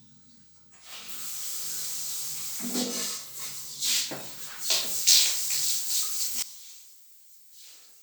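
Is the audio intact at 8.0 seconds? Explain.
No, at 8.0 seconds it isn't intact. From 6.42 s right to the end at 8.03 s, the sound drops by about 19 dB and turns faint, with the solid centre gone. That's most likely one channel inverted: with one side's polarity flipped, whatever both channels share cancels when they're summed to mono, so only the small difference between them comes through.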